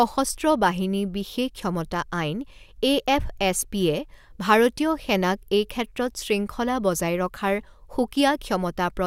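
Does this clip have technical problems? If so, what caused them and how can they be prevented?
No, there are no technical problems to report here.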